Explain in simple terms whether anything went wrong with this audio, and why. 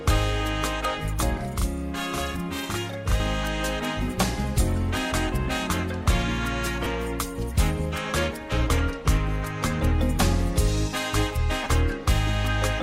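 A couple of things go wrong. From 1.37 to 3.2 s there's a channel delay (doubling): one side arrives 40 ms late, so the sound gets a quick slap-like double. Then there are lost LE Audio frames, brief dropouts at 6.84 to 6.86 s and 11.64 to 11.66 s, each a short smeary, noisy blip. The Bluetooth decoder is papering over missing chunks of 15 ms and 22.5 ms, roughly two and three frames' worth.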